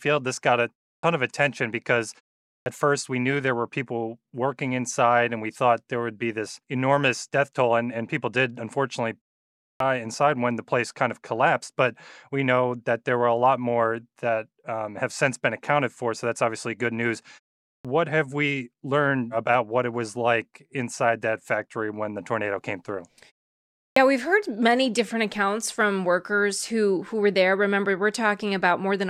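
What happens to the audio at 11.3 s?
At 11.3 s the speech carries on intact, with no dropout, glitch or distortion to be heard.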